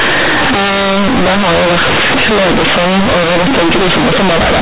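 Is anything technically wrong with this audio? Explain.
Yes. Throughout the speech, A-law telephone bytes are played back as plain linear 8-bit samples without being expanded, so this is companded audio read as linear. Each sign change jumps across roughly half the output range, making quiet passages as loud as peaks, producing harsh, buzzy distortion and loud noise in the pauses. The narrow band, with nothing above 4 kHz, fits ordinary G.711 telephone coding at 8 kHz.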